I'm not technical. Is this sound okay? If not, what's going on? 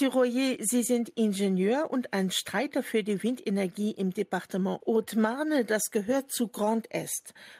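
Yes, it's fine: nothing in it sounds broken or glitchy, so there's nothing you need to worry about.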